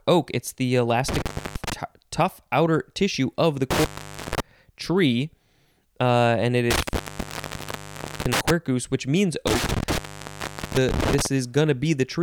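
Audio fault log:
1.08–1.73 s, 3.71–4.40 s, 6.71–8.51 s, 9.47–11.26 s: intermittent contact. The speech drops out four times as a loose plug or cable briefly loses its connection, crackling as the contact breaks and again as it remakes. While the line is open you get faint hiss. The gaps last about 0.3 s, 0.48 s, 1.31 s and 0.78 s, and the longest one is in the third dropout.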